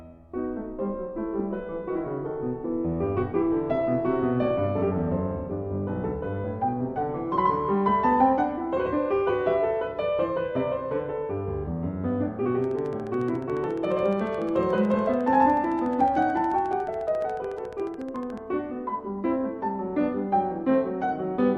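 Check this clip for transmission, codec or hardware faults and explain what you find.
One fault is present: a train of clicks from 12.64 to 18.39 s. Sharp ticks repeat at a regular 14 per second, about seventy in all. Each peaks roughly as loud as the sound itself. Their closely matching shape and steady pace point to a likely cause in nearby equipment interference or a faulty connection or power supply injecting pulses. They are heard as mechanical ticking layered over everything, gaps included.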